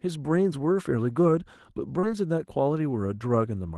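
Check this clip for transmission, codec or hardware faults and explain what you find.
There is one transmission fault, a short concealed packet loss. It sits on a call path whose top end stops near 12 kHz, which points to Opus coding at a modest bitrate.

From 1.99 to 2.05 s the speech briefly smears, as though the sound were held for an instant before real audio resumes. About 40 ms of packets arrived too late, so the receiver extended the preceding sound for roughly 33 ms, then blended back into the decoded stream.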